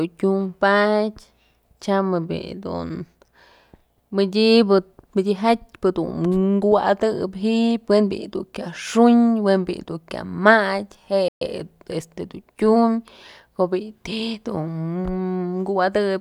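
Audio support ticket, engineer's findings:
Playback stall, 11.28–11.42 s: speech cuts to silence for about 130 ms mid-flow, not a click. Likely player buffer underrun or blocked audio thread.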